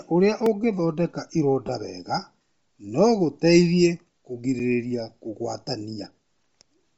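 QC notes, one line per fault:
Throughout, Bluetooth LC3 compression: a low-bitrate transform codec, likely LC3 at 32 kbps, strips and noise-fills the upper spectrum, giving the speech a breathy, grainy edge.
0.46 s, block of digital silence: the audio briefly dropped out, leaving a 1.84 ms run of zeros whose abrupt edges produce a single tick.
1.67–1.69 s, lost LE Audio frames: right after "ũrĩa ũngĩthondeka", about 15 ms of audio, consistent with two 7.5 ms frames, was lost. It was concealed with a reused spectrum, so the voice smears into brief noise.
4.59 s, block of digital silence: samples were replaced with zeros for 5.8 ms, which fits a 256-sample block. The hard cut out and back sounds as a short click.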